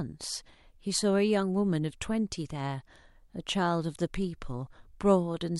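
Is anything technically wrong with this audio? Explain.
No, nothing in this speech recording points to a technical fault.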